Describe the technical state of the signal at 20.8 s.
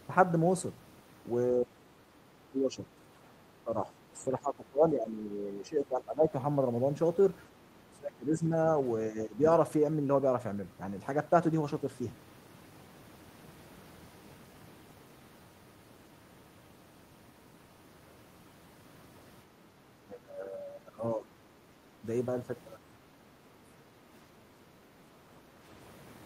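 At 20.8 s the speech is suppressed in double talk (20.05 to 21.34 s), dipping by around 15 dB, likely an echo canceller turning down this side's talker along with the loudspeaker echo it could not separate.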